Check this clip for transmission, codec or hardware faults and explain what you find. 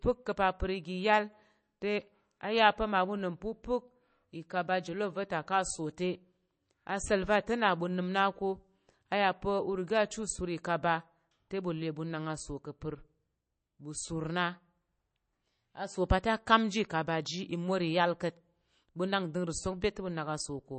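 One codec fault runs through the whole clip. MP3 compression, from start to finish: nothing reaches above about 8.3 kHz, which points to an encoder short of bits, likely MP3 at a low rate that fits about 32 kbps. Starved of bits, it cuts off the treble and drops weak frequency lines that flicker in and out between frames. The speech sounds dull and plainly watery, with swirling, metallic sibilants and smeared consonant attacks.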